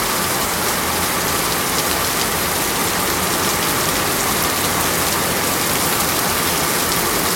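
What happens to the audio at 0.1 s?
Nothing goes wrong at 0.1 s; the audio passes through that moment intact, with no dropout, click, distortion or other fault.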